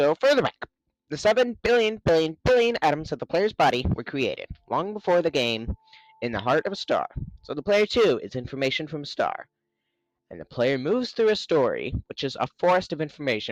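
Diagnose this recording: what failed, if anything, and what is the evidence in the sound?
No fault found in this recording.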